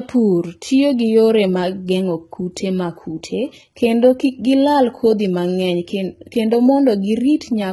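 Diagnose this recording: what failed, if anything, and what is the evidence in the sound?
The codec stage failed, most likely through HE-AAC compression at a very low bitrate, consistent with roughly 16 kbps in its v2 form. Across the whole speech clip the treble is heavily damaged and stops dead at 11.8 kHz. The upper band sounds synthetic: s sounds come out gritty and lispy because the encoder kept only the lower spectrum and rebuilt the highs by copying lower bands upward under a coarse envelope, so their harmonics don't line up with the real ones below the crossover.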